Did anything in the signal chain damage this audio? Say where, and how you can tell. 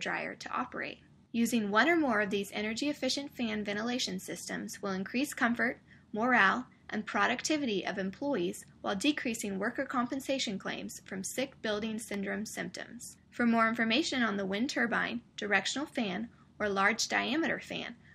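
No, nothing in the signal chain has audibly damaged this audio. Listening through, there is no sign that any stage from capture to playback has left its mark on the sound.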